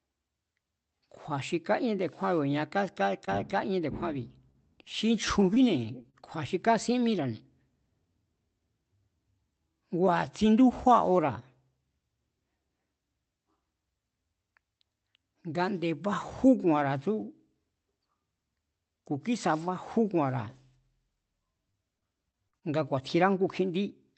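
From 3.25 to 7.17 s, scattered short gaps occur: about seven packets went missing or arrived late, none longer than a few tens of milliseconds, and the receiver bridged each by extending the preceding sound. The speech stays clear but carries brief ticks and small smeared hiccups.

From 21.71 to 22.64 s, repeated packet loss gives a robotic sound: five gaps, the longest 40 ms, arrive in quick succession, with 126 ms of concealment covering 14% of the stretch. The speech turns choppy with pieces missing, its top end already limited near 8 kHz by the call codec.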